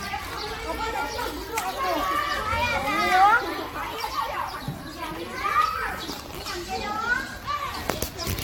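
Throughout, the sound is swirly, hollow and smeared, with blurred attacks and nothing above 18.9 kHz. That is more damage than one encode explains, likely generation loss from repeated AAC re-encoding.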